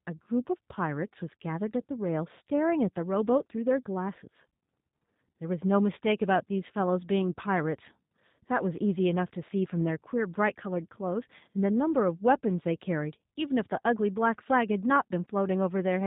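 Across the whole recording, the speech has been squeezed through a G.729 codec, and the sound fits its 8 kbit/s mode. The encoder keeps only a vocal tract filter, a pitch predictor and a few pulses per 10 ms frame, then rebuilds the voice from those. Nothing survives above about 3.8 kHz, so sibilants turn dull, and the reconstruction gives every syllable a plainly audible rough, buzzy, synthetic edge.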